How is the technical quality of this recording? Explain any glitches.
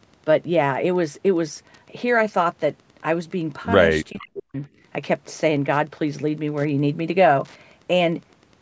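Two problems stand out in this speech, though the top end stopping at 8 kHz is just the call's microphone processing doing its job.

All the way through there's Wi-Fi interference: a nearby radio's beacon every 102.4 ms gets rectified into a faint, steady ticking, roughly ten per second, sitting well below the speech.

From 4.11 to 4.56 s the speech suddenly dips almost to silence. That's likely speech suppressed in double talk, where the echo canceller ducked the talker while the far side was also speaking.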